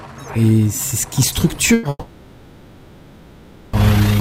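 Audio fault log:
1.73–1.85 s: burst of packet loss. About 100 ms of audio is missing, bridged by the receiver extending the last sound and fading it down, so a brief held buzz or dying hiss replaces the lost stretch before playback resumes further along.
1.89–3.75 s: long network dropout, the likely cause of a 1.84 s gap. The receiver stretches the last sound into a fading buzz or hiss, which decays to near-silence or low steady noise before the audio returns with that stretch absent.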